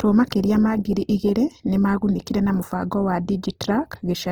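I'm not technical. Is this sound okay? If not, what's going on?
No. Throughout the speech there is a grainy, rough, noisy texture, likely from Opus compression. Unlike MP3's watery swirling, it stays full and bright but sounds coarse.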